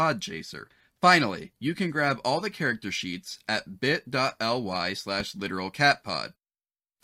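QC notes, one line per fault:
5.20–5.22 s loud pop: one sharp pop about 5 dB above the speech, which continues underneath unlike a dropout; likely a sudden voltage spike.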